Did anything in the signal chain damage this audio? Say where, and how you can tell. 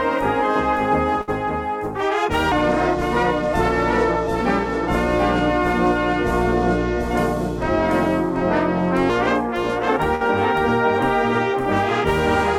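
Yes. A doubled audio track runs through the whole clip, likely from a second, slower capture path or an edit holding two copies out of step. A full-band copy trails by about half a second, roughly 5 dB quieter, with no decay or room colour.

At the network stage there are two bursts of packet loss, at 1.21 to 1.30 s and 10.15 to 10.23 s. The receiver concealed each by extending the last sound for about 60 ms and 52 ms while fading it, then resumed with about 60 ms missing.

From 2.52 to 9.10 s there is a section at the wrong speed, likely from playback or an edit running on the wrong clock. It plays at 0.763 times its recorded speed, so the sound drops about five semitones and drags, with pitch and tempo shifting together.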